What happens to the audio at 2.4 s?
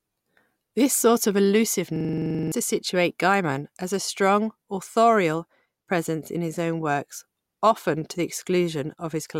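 A system hang loop runs from 1.96 to 2.52 s: a 43 ms buffer repeats at 23.4 Hz, a machine-gun stutter, before "to situate".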